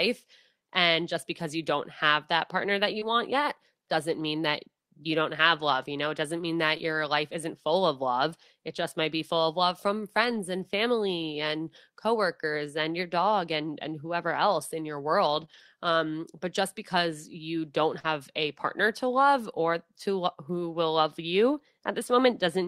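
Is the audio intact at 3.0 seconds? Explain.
No. Short concealed packet loss runs from 2.99 to 3.03 s: about 20 ms of the stream arrived too late, and the decoder bridged the hole by extending the preceding sound before crossfading back. This leaves a brief smear or wobble where something short may drop out.

Overlapping its end, a lost packet rebuilt from error correction covers 3.01 to 3.03 s. These 20 ms, which fits a single lost packet, were replayed from a low-bitrate copy carried in the following packet, so there is no gap, but the sound turns rougher and noisier.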